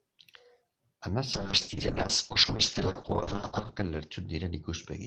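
At 1.35 s a call bitrate drop cuts encoding from 48 to 6 kbps and bandwidth from 20 kHz to 8 kHz, leaving the speech muffled and watery through the end.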